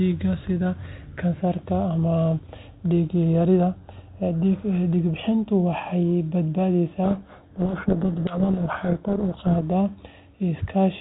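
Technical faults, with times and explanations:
7.04 to 9.6 s, codec payload misread: the 32 kbit/s G.726 stream turns to harsh, grinding distortion that buries the speech. The decoder takes each code word's bits in reversed order, so every predicted difference is wrong and the adaptive predictor goes astray until packing agrees again.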